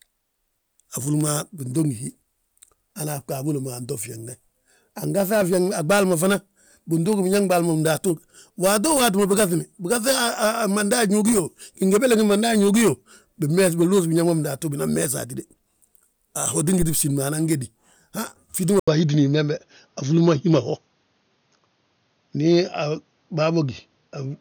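Phantom power thump at 16.82 to 17.09 s in this speech recording: a supply switched on a live input sends a step through the coupling capacitors, giving a deep thump decaying over about 61 ms. Input switched to a poorer device, likely, from 18.80 s to the end: after an 80 ms silence the speech turns duller, with nothing above 6.6 kHz, a level shift of roughly 5 dB and a new noise floor about 50 dB down.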